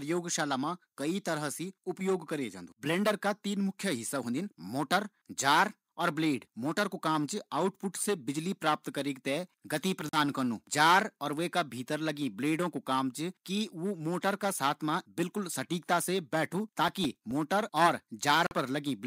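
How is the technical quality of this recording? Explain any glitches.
The speech has three short glitches: two brief dropouts and one burst of crackle.

At 10.09 s and again at 18.47 s the audio drops to silence for about 42 ms, then resumes. That's likely a Bluetooth stall: interference delayed packets, the headphones' buffer emptied, and playback paused until the resent data caught up.

From 16.88 s to 17.31 s there's processor overload crackle, a gritty tearing over the speech. The processor kept missing deadlines on tiny buffers, around 3 ms each, roughly ten of them, and each miss left a hard-edged gap of silence.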